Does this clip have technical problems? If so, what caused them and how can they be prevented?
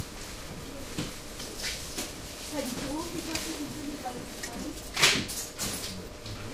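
Yes. At 4.48 s and again at 6.08 s the audio jumps ahead, with no gap, as if about 70 ms were cut out. This is likely a dropped buffer (overrun), where unread input samples were overwritten. Prevent it with larger buffers and higher-priority capture threads.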